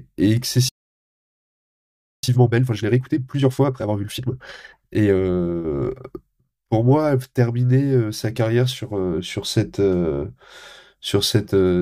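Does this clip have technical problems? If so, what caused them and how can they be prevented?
Yes. Playback stall, 0.69 to 2.23 s: the speech falls silent for about 1.5 s, likely because the player's buffer emptied or its audio thread was blocked. A deeper playback buffer and a high-priority audio thread would prevent this.

Time-compressed catch-up, 2.23 to 5.23 s: the speech runs 1.5 times fast at normal pitch, as small cut pieces are cross-faded to clear the backlog. Preventing the stall removes the backlog, and a gentler catch-up rate would keep the speech sounding natural.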